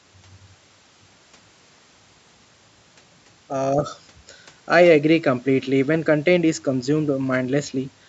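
No technical faults can be heard anywhere in this speech.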